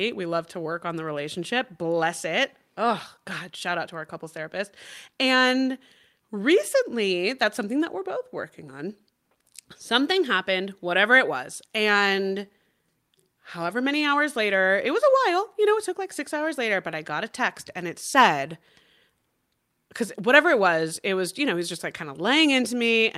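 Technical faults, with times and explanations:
No technical faults can be heard in this speech.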